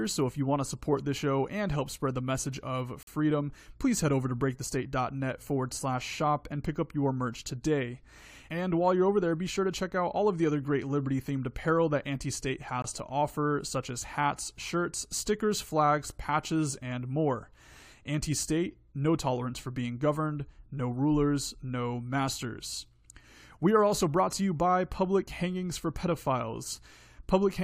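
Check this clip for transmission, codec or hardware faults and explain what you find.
Two faults stand out, both a block of digital silence. At 3.03 to 3.07 s and 12.82 to 12.84 s, the speech drops to silence for about 43 ms and 21 ms, which fits a missed 2048-sample and 1024-sample output buffer. With no fade in or out, each gap is heard as a short hole.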